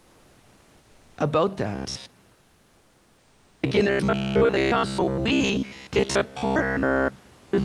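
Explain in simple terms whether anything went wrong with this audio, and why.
From 1.75 s to the end, the audio shows robotic sound from repeated short buffers. New audio was likely arriving too slowly, so the receiving software kept replaying the last tiny chunk of sound, about 15 ms long, while most of the real speech in between was skipped. Repeating that chunk about 67 times a second forces a fixed low buzz onto the voice. The speech turns metallic and mechanical, though its rough shape still comes through.

Between 2.35 s and 3.55 s, about 1.2 s, there is comfort noise in place of the background. The sending side likely decided nobody was talking and paused the audio, as an Opus call does when it saves data during silence. The receiver filled that gap with made-up hiss shaped roughly like the room noise. For that stretch, the real background, with its small details, becomes a flat, featureless noise that is slightly quieter, until the sound resumes.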